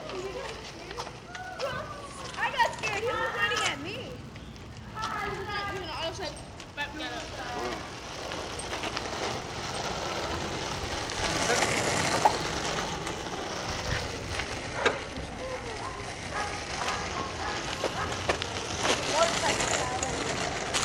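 From 0.0 to 14.6 s the filter is restarted on every block, discarding its state at each boundary and starting from silence. Each block therefore opens with a small transient, heard as a 93.8 Hz buzz that fits a 512-sample buffer and tracks the sound's level.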